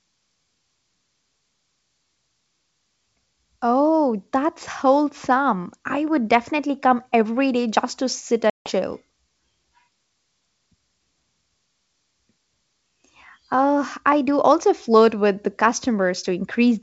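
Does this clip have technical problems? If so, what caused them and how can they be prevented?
Yes. Packet loss on an ADPCM call opens a hard silent gap at 8.50 to 8.72 s, right after "day just to sit". About 160 ms goes missing, several packets' worth. The decoder's predictor and step size lose sync, so speech resumes with brief distortion. Jitter buffering with packet loss concealment and decoder state resets prevent this.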